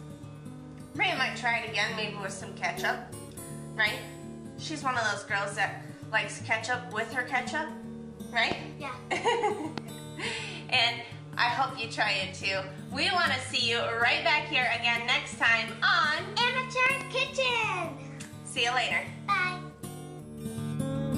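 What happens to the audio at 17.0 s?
Right around there you get a loud pop, actually a pair of sharp pops between 16.86 and 17.03 s, jumping well above the surrounding level while the sound keeps going underneath. That's likely a voltage spike from a plug, switch or static getting into the chain.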